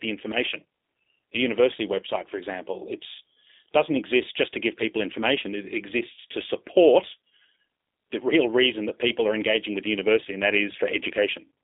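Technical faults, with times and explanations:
Throughout, G.729 codec. The speech sits in a narrow telephone band, roughly 300 Hz to 3.7 kHz, and nothing reaches above 3.8 kHz. The codec does not store the waveform. It resynthesises each short frame from a vocal tract filter, a pitch predictor and a few coded pulses. That model misses fine detail, so the voice sounds plainly rough and synthetic. The roughness fits a low-rate coder near 8 kbit/s.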